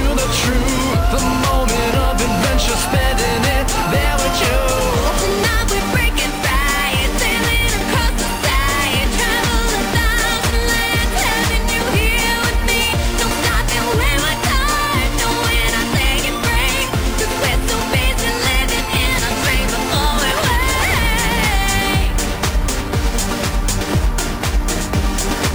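Throughout the clip there is imaging from sample-and-hold upsampling. The rate was raised by simply holding each sample twice rather than interpolating through a proper anti-imaging filter, which fits a step from 24 kHz to 48 kHz. A mirrored copy of the spectrum fills the 12 kHz to 24 kHz band at about 17 dB below the signal, heard as a bright metallic fizz that tracks the level of the sound, with its lowest components moving inversely to pitch.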